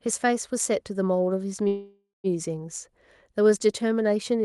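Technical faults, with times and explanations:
1.67–2.27 s, call audio freeze: a fading buzz, then 160 ms of silence, before the speech resumes with nothing lost; likely delayed packets emptied the jitter buffer.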